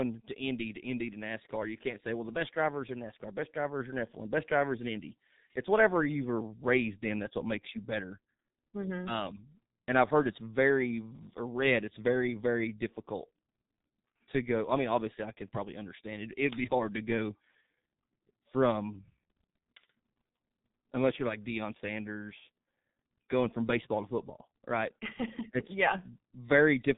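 G.723.1 codec damage runs through the whole of this speech recording, from start to finish. Nothing reaches above about 3.8 kHz, so the sound is muffled and dull. The coder works in 30 ms frames and refreshes its model of the vocal tract only slowly, which leaves the voice hoarse and smears consonants together. The damage is heavy, consistent with a bitrate near 6 kbit/s.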